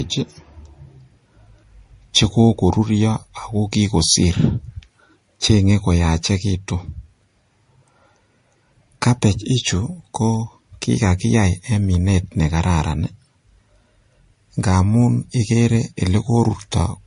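Transcoding between lossy codecs runs throughout the speech, with nothing above about 10.6 kHz. The artefacts fit a likely low-rate MP3 stage near 40 kbit/s re-encoded as Vorbis near 50 kbit/s, each codec's damage layered on the other's.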